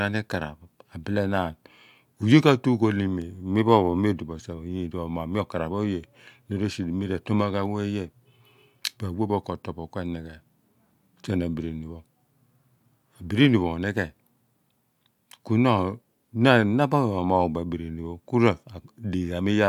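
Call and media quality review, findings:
Bit error spike at 3.22 s in the speech. Symptom: single sharp broadband tick, about -28 dBFS, unrelated to surrounding signal. Duration: three consecutive samples, then immediate return to normal waveform. Probable component: memory buffer or digital link. Mechanism: flipped bit throws sample value off by a power of two, producing a transient click with no acoustic cause.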